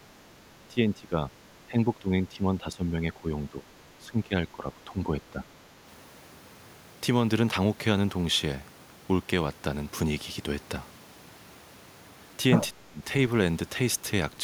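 Speech suppressed in double talk occurs at 0.68–1.32 s, 1.67–3.67 s, 3.98–5.48 s and 12.71–13.02 s. The voice dips by about 10 to 15 dB, and by about 30 dB in the short final event. The likely cause is an echo canceller that mistook simultaneous talk for echo and turned both down.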